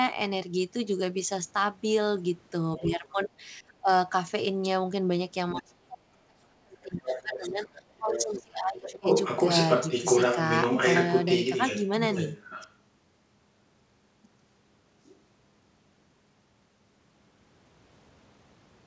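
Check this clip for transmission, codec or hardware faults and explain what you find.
Two kinds of fault are audible in this speech clip, both tied to echo cancellation during a call.

Other side's voice leaking through: a second voice appears at 2.78–3.27 s, 7.12–7.69 s, 8.14–8.43 s, 9.04–12.73 s and 15.04–15.12 s. The likely cause is a loudspeaker feeding the far end back into the microphone, with the echo canceller leaving residue. It sits about 20 dB, about 10 dB and about 30 dB below the talker in the short bursts. From 9.04 s it rises to about 5 dB above the talker. On a spectrogram it shows as a second harmonic pattern overlapping the main one.

Speech suppressed in double talk: the talker's level dips at 2.78–3.9 s, by up to about 15 dB for roughly half a second. It dips harder at 5.53–9.09 s, up to about 30 dB across roughly three seconds. This is likely the canceller hearing both sides at once and attenuating everything. 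The voice fades, dulls or drops out in pieces. The waveform shows sudden envelope notches, and the spectrogram shows energy and upper harmonics thinning out.

The call audio stops sharply at 8 kHz, which fits a G.722 path at 64 kbps.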